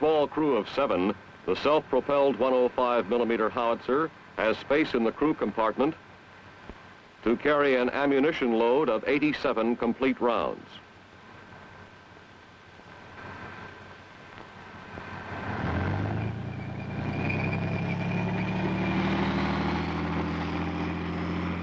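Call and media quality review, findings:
No findings for this call and media quality review; the call path carries the audio with nothing above 8 kHz, which fits a wideband codec such as G.722.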